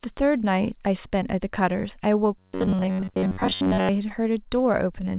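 From 2.38 to 3.90 s the speech becomes a rigid, metallic robotic buzz at 93.8 Hz. The likely cause is a repeated short buffer of about 10.7 ms replacing most of the audio. On a spectrogram this shows as evenly spaced harmonics, with a periodic waveform.

At 4.09 s a short concealed packet loss leaves a 10 ms hole filled by continued sound, heard as a brief smear and seen as a slightly blurred slice below the call path's 4 kHz ceiling.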